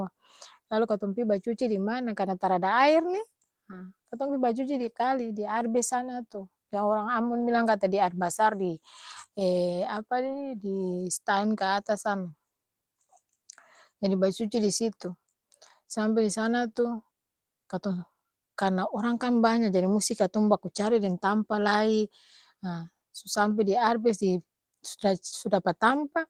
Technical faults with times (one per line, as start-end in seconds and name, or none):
10.25-10.39 lost packet rebuilt from error correction